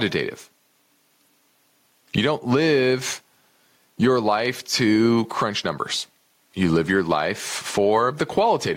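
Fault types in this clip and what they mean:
Gain pumping: The input gain is likely set far too high, so a fast limiter or compressor keeps clamping down on every loud syllable. Across the whole speech clip the gain swings by around 10 dB, leaving the level squashed and breathing.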